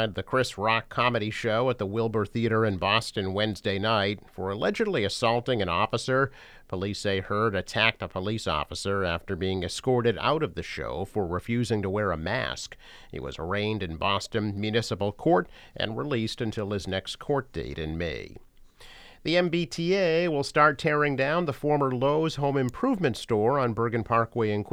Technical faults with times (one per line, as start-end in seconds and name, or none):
22.69 electrical switching spike